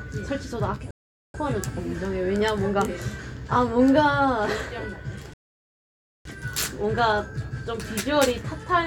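At 0.91 s the sound drops into silence and picks up again at 1.34 s, a rebuffering stall lasting about 0.43 s. The player exhausted its downloaded audio and waited for more data, so playback resumes exactly where it halted. A second stall runs from 5.34 s to 6.25 s and adds about 0.92 s. Unlike a dropout, which removes audio and jumps forward, these gaps only add time: nothing is skipped.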